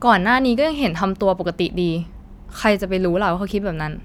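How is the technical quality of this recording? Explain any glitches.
The technical quality of the recording is good, and there are no glitches to explain.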